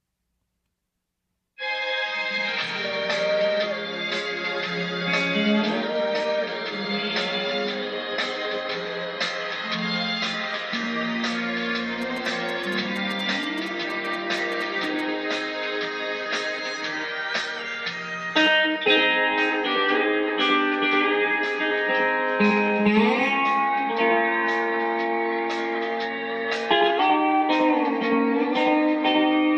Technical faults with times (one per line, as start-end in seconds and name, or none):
12.02-15.01 GSM signalling bursts